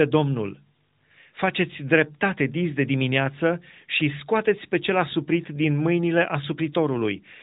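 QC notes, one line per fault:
The speech passes through an AMR narrowband mobile codec path, with nothing above about 3.8 kHz and only light coding texture that fits the codec's 12.2 kbps mode, and no faults occur anywhere in the clip.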